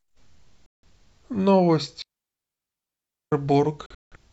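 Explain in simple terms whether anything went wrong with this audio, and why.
A few things did go wrong, and they're all moments where the speech simply drops out.

The first is a digital broadcast dropout from about 0.66 to 0.88 s. The receiver lost good data for a moment, so it muted and let the sound cut away for roughly 0.17 s before picking up again. Whatever was said in that gap is gone. The same fault returns near the end, from about 3.86 to 4.17 s, but this time it's broken into several short holes spread over about a quarter of a second. The longest hole is again about 0.17 s, and the missing pieces add up to around 0.21 s. The gaps are the size of a handful of lost frames.

In between is a digital wireless dropout, running from about 2.02 to 3.32 s. The wireless link lost too much data, so the receiver faded down very quickly and stayed quiet for a full 1.3 s. It's a clean, near-silent hole with no crackle or burst of noise at either edge, and the speech just picks up again afterwards.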